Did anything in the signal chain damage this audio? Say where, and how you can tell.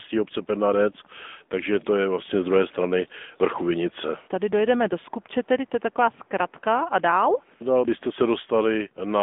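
Yes, at the codec stage, across the whole clip: this is the AMR narrowband mobile codec. The speech is boxed into roughly 200 Hz to 3.6 kHz, with nothing above 3.8 kHz, and has a plainly audible buzzy, synthetic edge that fits a mid-rate mode around 10 kbps.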